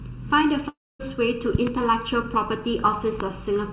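The whole speech clip has a hollow, phasey colour from channel delay (comb filtering). One channel arrives a fraction of a millisecond behind the other, and when the two are folded to mono, whatever they share cancels at evenly spaced frequencies. The first notch sits somewhere around 700 Hz, right in the body of the voice, which is why it sounds thin and boxy. The narrow band, with nothing above 4 kHz as you'd expect from a G.711-style call path, makes the dullness worse.

At 0.68 s the sound breaks up. There's a smear of the last sound that fades out, then about a quarter second of near silence, and the speech returns at 1.01 s having skipped roughly a third of a second. That fits a long network dropout: the receiver papered over the gap by stretching the last bit of sound, gave up, and resumed further along without the part that was lost.

From 1.55 to 1.69 s there's a loud pop, actually a pair of sharp clicks, about 10 dB above the speech, which carries on underneath. 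Another loud pop lands at 3.20 to 3.23 s, a single hit about 15 dB over the signal. Both likely come from a sudden voltage step or pulse, such as a connector, a switch or a driver glitch, getting into the chain.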